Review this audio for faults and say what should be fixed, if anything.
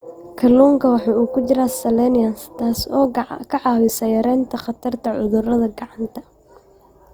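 Opus compression, throughout: the speech is plainly rough and grainy, likely from band folding and noise fill in music mode, which fits a rate near 24 kbps. Encode at a higher bitrate, or work from an uncompressed source, to prevent it.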